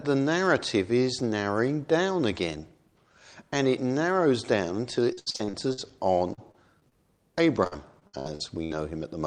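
From 5.13 to 5.79 s the sound turns choppy: repeated packet loss (robotic sound), with seven gaps, the longest about 72 ms, patched by extending the last audio so that roughly 39% of that stretch is filled-in sound. The same breakup returns from 6.33 to 6.93 s, lighter at four gaps, and again from 7.63 to 8.72 s with seven gaps. Unlike a single dropout, the holes come in quick succession, giving a stuttering, robotic texture.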